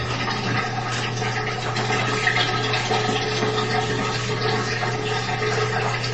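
Throughout, plainly audible MP3 compression, likely from encoding near 30 kbps, sounds watery and swirly; a spectrogram shows flickering gaps and nothing above 8.3 kHz.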